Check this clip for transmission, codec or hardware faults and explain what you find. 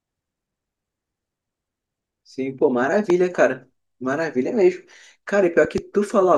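Three loud pops interrupt the speech. At 3.10 to 3.12 s a single sharp crack peaks roughly 10 dB above the voice. At 5.65 to 5.80 s a softer double pop rises about 5 dB. A sudden voltage step, likely from a plug, switch or static discharge, adds these pulses on top of the continuing speech.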